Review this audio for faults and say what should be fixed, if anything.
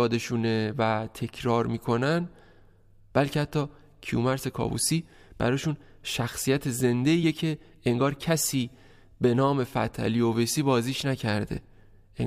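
Two short bursts of damaged data in a compressed stream occur at 7.22 s and 11.57 s, each heard as a brief glitch in the speech. At each point, corrupted bytes in the encoded file make the decoder misread the frame, lose synchronisation and search for the next valid frame header, producing a momentary non-speech artefact. Both spots need repair, ideally by re-encoding from an intact source. To prevent it, transfer and store the file with checksums and re-encode only from a verified original.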